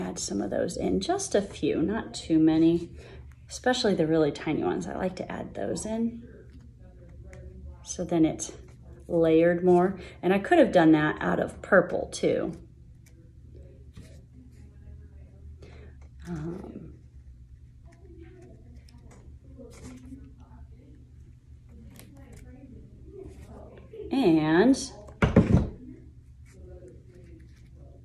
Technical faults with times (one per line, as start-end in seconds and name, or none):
none